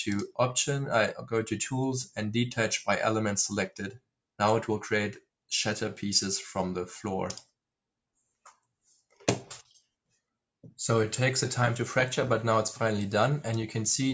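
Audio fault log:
3.69–4.1 s and 8.85–9.21 s, sound cut by the noise suppressor: steady parts sink by up to about 22 dB, then about 12 dB, while sharp onsets survive, unlike a full dropout.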